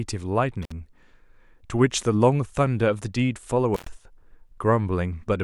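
At 0.63 s and again at 3.75 s, an intermittent contact briefly opens the line, cutting the speech for about 54 ms, then about 104 ms, with crackle at each edge.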